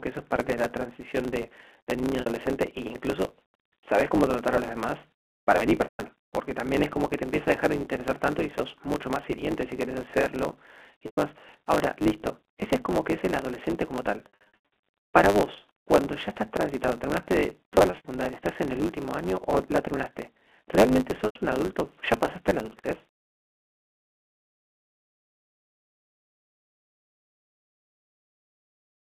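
Throughout the speech, a block size mismatch (truncated) sets up a steady 100 Hz buzz. One stage writes longer blocks than the next reads, so each block's tail is discarded, and the speech runs about 1.09 times fast with its timbre intact over the band-limited G.711 telephone line.

Packet loss with pitch repetition occurs at 2.21 s (60 ms), 5.84 s (160 ms), 11.06 s (120 ms), 14.30 s (400 ms scattered over about 520 ms), 17.75 s (160 ms scattered over 320 ms) and 21.26 s (100 ms). The receiver repeats the last pitch period, producing a held, buzzy tone that fades out during longer gaps before the speech cross-fades back.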